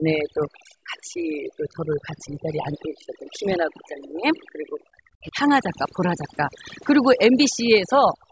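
Throughout, the speech sits over a lowered background that breaks into twinkling specks: overdone noise removal, cutting bands near its noise estimate too hard. From 0.0 to 4.8 s the speech dips by roughly 15 dB, then from 5.14 to 5.36 s it nearly vanishes, down around 40 dB, likely speech suppressed in double talk by the echo canceller. From 8.21 s to the end, the room sound drops by about 15 dB for roughly a tenth of a second, the background gated by the echo canceller.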